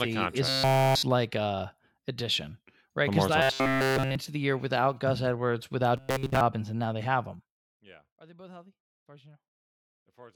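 Audio likely arrived too seldom, so short buffers of about 7.5 ms were replayed in place of skipped speech. This gave robotic sound from repeated short buffers, a metallic 133 Hz buzz, from 0.49 to 1.03 s after "a contract is", from 3.42 to 4.15 s just before "the year without", and from 5.97 to 6.41 s, where most of the audio was repeated. From 7.34 to 7.79 s, after "and now they have", a gain drop of about 25 dB was applied in unsmoothed 1 dB steps, roughly 100 per second, producing zipper noise, a rapid ticking over the fading level.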